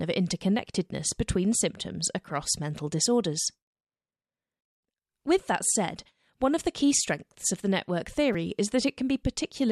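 A repeated buffer occurs at 8.33 s, just after "strengths of the network." Fresh audio failed to reach the output in time, so the device replayed the block it already held, three extra times in a row, which fits a buffer of about 5 ms. Because each repeat is so short, the hard joins recur every 5 ms and merge into a brief buzzy click, and roughly 15 ms of the real speech is lost.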